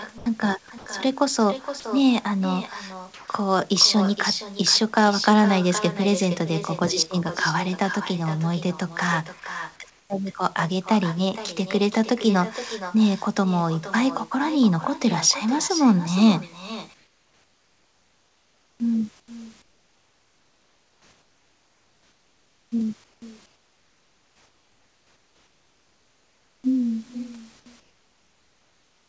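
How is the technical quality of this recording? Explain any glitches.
The recording has three problems: an uncancelled echo throughout, brief gaps near the start, and a synthetic background during pauses.

An echo with no canceller runs through the whole clip. The far end's loudspeaker feeds its microphone and nothing removes that return, so every phrase is followed roughly half a second later by a thinner copy about 13 dB quieter.

Sound was dropped by the voice detector at 0.18 s for 80 ms, at 0.78 s for 80 ms, at 1.80 s for 40 ms and at 9.40 s. The sender's detector likely mistook the sound for background and stopped sending. Each instant briefly turns into steady noise before the sound returns.

Comfort noise replaces the background at 3.14 to 3.28 s, 9.40 to 10.10 s, 16.94 to 26.64 s, and from 27.80 s to the end. During these pauses the sender likely stops transmitting, and the receiver fills the gap with featureless synthetic hiss in place of the real room sound. 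At 3.14 s this hiss is about 3 dB louder than the room. In the final stretch it is about 10 dB quieter, so that background audibly thins out. The band-limited call path, with nothing above 8 kHz, shapes all of this.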